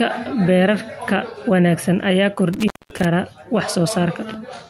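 Between 2.53 and 3.05 s the speech drops out abruptly, with crackle at the break and faint hiss filling a gap of about 220 ms. This is an intermittent contact: a loose cable or plug briefly lost its connection, interrupting the signal before it reconnected.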